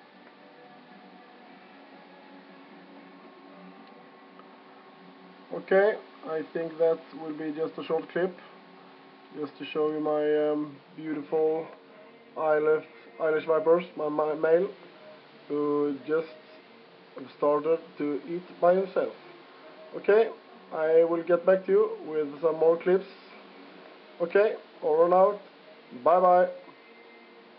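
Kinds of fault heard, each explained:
No technical faults can be heard anywhere in the signal.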